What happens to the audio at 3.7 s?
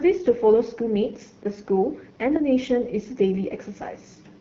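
At 3.7 s the speech is still passing through the AMR wideband (HD Voice) codec, which affects the whole clip rather than that moment alone. The codec models the vocal tract and drives it with pulses up to 6.4 kHz, then fills 6.4 to 7 kHz with shaped noise. Here it runs at a starved rate; the plainly audible rough, raspy grain on the speech fits one of its lowest modes, around 8.85 kbit/s.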